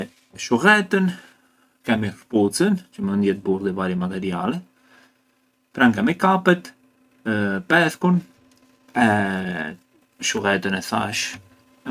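Nothing in this speech recording stood out as a technical fault on listening.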